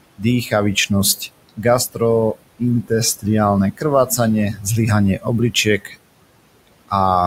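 From start to finish the speech carries noise suppressor artifacts. The suppressor pulls the steady room noise, which sits about 17 dB under the voice, down by about 21 dB whenever it judges a frame to be noise, then lets it back up under each phrase. The background therefore pumps with the speech. Unlike a noise gate, which opens and shuts the whole signal, this works band by band.

The same processing also produces speech cut by the noise suppressor, mistaking parts of the voice for noise. This happens at 0.17 to 2.01 s, 2.34 to 3.25 s, 3.72 to 4.19 s, 4.53 to 4.66 s and 5.17 to 5.96 s, with drops of about 19, 18, 14, 9 and 18 dB. Only fragments within each span are hit, roughly 0.4 s in the first and a few tenths of a second in the others. Soft consonants and word endings fade or get swallowed. Unlike a packet dropout, there is no hard gap or click, only a muffled dip in level.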